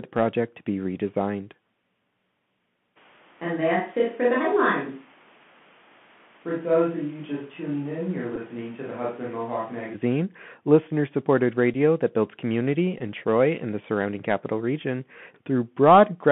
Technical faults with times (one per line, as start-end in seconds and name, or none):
0.00-16.32 Bluetooth CVSD headset codec
2.98-9.93 switch to a distant microphone
8.36 Bluetooth headset packet repeated
11.74 Bluetooth headset packet repeated
12.98-13.01 Bluetooth headset packet repeated